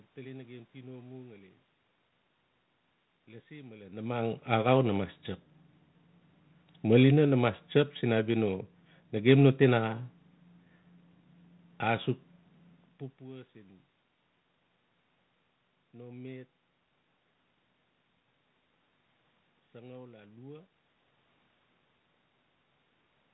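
No technical fault can be heard in this speech recording; the sound stays steady and intact throughout, with the room noise and the changes in level as the talker shifts position belonging to the recording itself.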